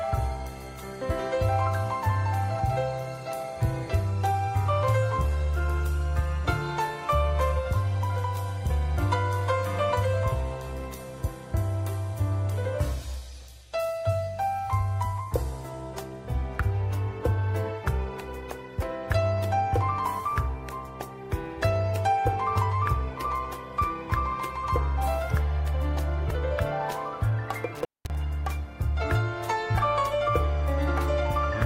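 Near the end of the audio there is one intermittent contact fault, spanning 27.75 s to 28.15 s. The signal drops out for about 0.2 s inside that window, with crackle as the connection breaks and again as it remakes, and faint hiss carrying through the gap. The behaviour points to a loose cable or plug whose contacts separated briefly and then closed again, interrupting the audio path.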